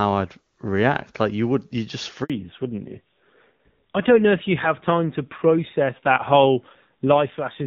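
A speech recording with two faults, both at the same moment. The first is a handover gap. Right after "you would you just", the voice dies away at 2.24 s and stays silent until 2.30 s, a 60 ms hole. No speech frames reached the receiver while the call was being passed from one network link to the next, so that slice of audio is gone rather than masked. The second is a fallback to narrowband, starting at 2.30 s and lasting to the end. Before it, the speech carries the clean, full top end of HD Voice, which fits AMR-WB at its highest rate. After it, nothing remains above 4 kHz. The new link carries an older narrowband codec, and the sound fits AMR-NB at a modest rate. The voice turns duller and more muffled, and rougher.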